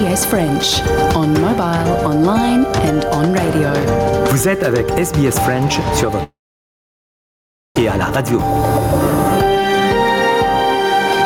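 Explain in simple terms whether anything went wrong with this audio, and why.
Two things went wrong here. First, there's gain pumping all the way through. Loud and soft parts end up closer in level, so everything sounds squashed together. That's likely the input gain set way too high, with a fast limiter yanking it back down on every loud moment.

Second, there's a long network dropout from 6.23 to 7.77 s, about 1.5 seconds. The audio briefly trails off into a fading buzz or hiss, then goes basically silent for most of that stretch. It picks back up afterwards, but that chunk is simply gone, likely because nothing got through the connection for that moment.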